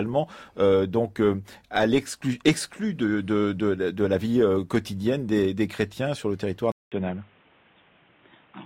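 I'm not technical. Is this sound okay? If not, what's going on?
No. At 6.72 s, after "chrétiens sur le territoire", the input likely switched to a poorer device: a brief gap, then muffled, duller speech with faint new background noise.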